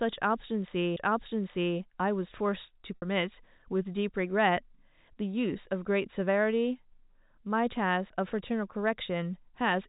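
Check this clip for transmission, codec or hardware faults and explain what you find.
Two faults can be heard in the speech, a disc skip and a packet-loss concealment, over a G.711 mu-law telephone path at 64 kbps that adds only faint coding damage.

At 0.96 s there is a CD skip. A knock or a flaw in the disc made the laser jump to a different turn of the spiral, so the player muted for a very brief moment, a few milliseconds, and then carried on from another point. It sounds like a small tick followed by an abrupt splice, with the sound continuing from a different place. A dropout would instead resume where it left off.

From 2.96 to 3.02 s there is packet loss with pitch repetition. About 60 ms of audio never arrived, which fits three lost 20 ms packets. The receiver filled the gap by repeating the last pitch period of the speech. Because the repeat fades out over about 50 ms, it comes across as a slightly held, buzzy tone fading toward silence, and then the speech returns with a short cross-fade. 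That held buzz sets it apart from the CD skip, which mutes and jumps rather than prolonging the sound.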